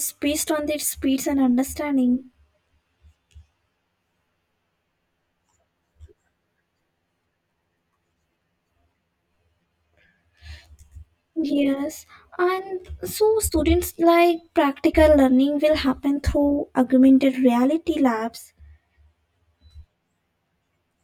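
Channel delay (comb filtering) runs from start to finish: one channel arrives around 10 ms late, and summing to mono cancels shared content at evenly spaced frequencies, starting near 40 Hz. The speech sounds hollow and phasey, with fixed spectral notches.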